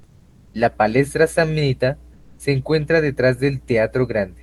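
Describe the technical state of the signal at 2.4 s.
Right around 2.4 s the comfort noise in place of the background is just ending. From 2.13 to 2.39 s the real room tone, about 31 dB below the loud parts, gets swapped for flat, featureless hiss, likely Opus DTX filling a pause. The level also shifts by about 2 dB, all within the 12 kHz band of the call codec.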